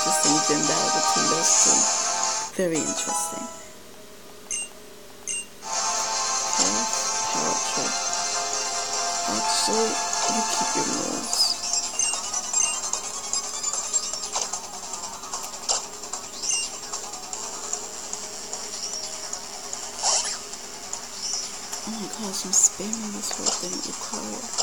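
From the very start and all the way through, there's a 50 Hz buzz riding under the sound, and it only shows up when something's actually playing. That's the resampler restarted on every block. The 48 kHz to 44.1 kHz conversion was done in 20 ms chunks, each one treated as if nothing came before or after it, so every chunk boundary gets a tiny glitch. Fifty of those a second blur into a buzz rather than separate ticks.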